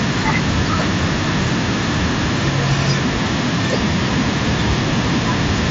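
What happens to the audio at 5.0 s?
At 5.0 s the audio is intact, with no dropout, glitch or other fault at that moment.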